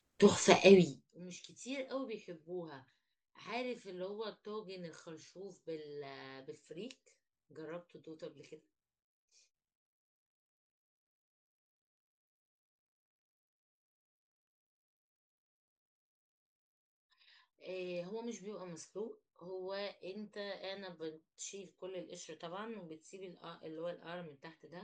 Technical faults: zipper noise

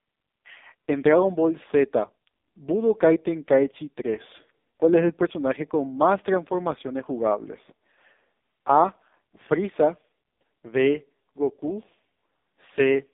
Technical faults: AMR narrowband mobile codec

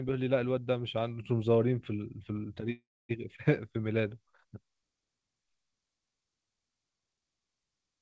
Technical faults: call audio freeze

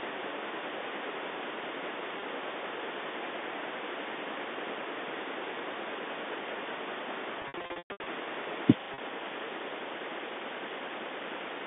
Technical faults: packet loss with pitch repetition

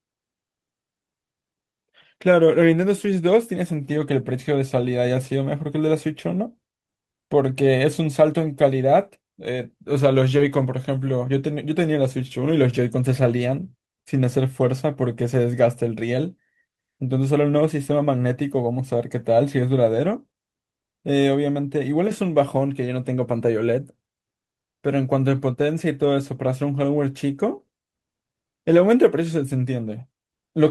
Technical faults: short concealed packet loss

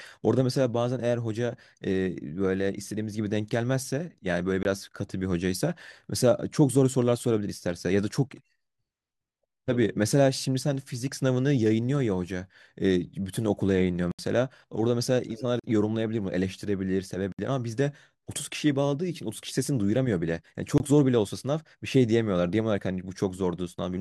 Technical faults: block of digital silence

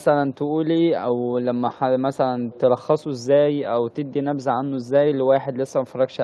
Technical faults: echo leak

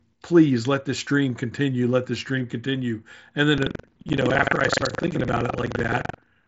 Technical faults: buffer tearing

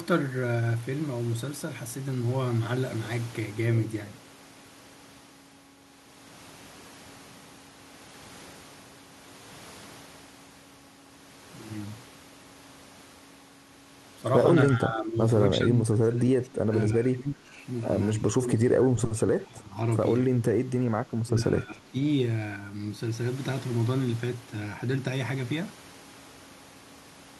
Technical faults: speech suppressed in double talk

